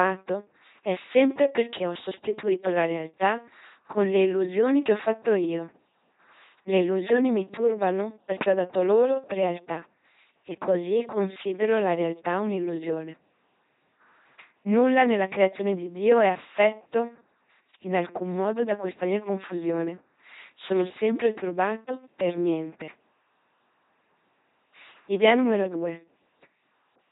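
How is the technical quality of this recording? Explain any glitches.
The quality is poor throughout, because the speech has been passed through an LPC-10 vocoder. Across the whole recording, a ten-pole vocal tract filter is driven by either a pulse train or noise, with each moment forced to be fully voiced or fully unvoiced. The heavy damage, which fits a 2.4 kbit/s link, gives a buzzing, mechanical robot voice with stray buzz or hiss where voicing is misjudged, and nothing above 3.8 kHz.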